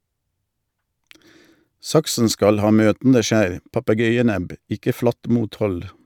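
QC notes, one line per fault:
No faults heard anywhere in this speech recording.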